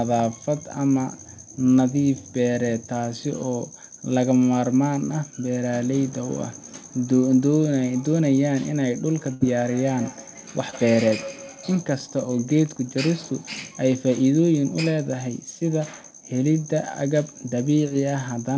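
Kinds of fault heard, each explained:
Feedback echo between two devices: From 9.08 to 11.86 s the speech comes back again at a steady spacing of roughly 150 ms, each return quieter, thinner and more ringing than the last, peaking about 19 dB below the direct speech. A second device in the same room is replaying this call, and the microphone picks it up again. The echo canceller only removes its own device's playback, so the stray copy circulates.
Burst of packet loss: At 9.34 to 9.42 s, inside the echo stretch, a run of packets failed to arrive in time. The receiver extended the last sound for about 63 ms, letting it fade as a held buzz or hiss. When real audio returned, roughly 60 ms of the original had been skipped, so the speech jumps forward with that piece gone.
Short concealed packet loss: At 10.70 to 10.74 s and again at 17.88 to 17.92 s, about 20 ms of audio each time never reached the decoder. 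The receiver filled each hole by continuing the preceding sound, pitched if voiced or as shaped noise if not, then blended back. Each gap sounds like a brief smear or wobble in the G.722 audio, which stops at 8 kHz.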